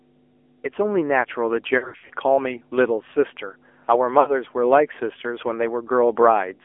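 A ground loop or nearby transformer is coupling the 50 Hz power line into the signal throughout, leaving a steady mains hum that sits fairly high, roughly 15 dB below the speech.

The whole clip has also passed through the AMR narrowband mobile codec, which confines the speech to 300 Hz to 3.4 kHz. Its buzzy, synthetic quality points to a low mode near 7.4 kbps.

From 1.78 to 2.11 s, lost AMR speech frames scattered across about 320 ms force the decoder to reuse stale pitch and vocal tract settings with falling gain. The speech warbles and dips, with the longest gap lasting about 80 ms. A shorter loss of about 60 ms, from 4.20 to 4.37 s, causes a brief smeared dip before the speech returns rough.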